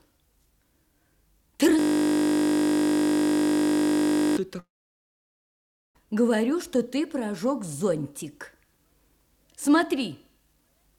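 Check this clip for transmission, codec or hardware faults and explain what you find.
Three faults are audible: a looping hang, a long gap, and grainy low-resolution audio through the end.

From 1.79 to 4.37 s there is a system hang loop. The system froze while the sound hardware kept replaying the same 20 ms of buffered audio, which fits a very short ring buffer. Repeating 129 times at 50 Hz, it turns the sound into a steady buzz pitched at the loop rate.

From 4.59 to 5.97 s the sound breaks off, most likely from a long network dropout. About 1.36 s of audio never arrived. The receiver briefly carries the last sound forward as a fading tail, then goes silent for about 1.29 s. When the audio resumes, the missing stretch is simply gone.

From 6.66 s to the end the audio sounds coarse and gritty, likely low bit depth without dither. The samples appear rounded to about 10 bits with no dither, so the error tracks the signal. 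It leaves grainy distortion roughly 45 dB below the sound that shifts as the sound changes.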